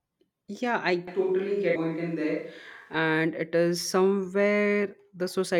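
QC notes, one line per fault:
1.07–2.94 s, switch to a distant microphone: the speech suddenly turns roomy and hollow, losing its low end, then snaps back. Level stays about the same, with background noise around 40 dB under the speech. It's likely the close mic dropped out and a farther one covered.
1.75 s, damaged data in a compressed stream: a brief chirp or blip, inside the distant-mic stretch. Corrupted bytes there made the decoder misread those frames and lose sync until it locked onto the next good frame header.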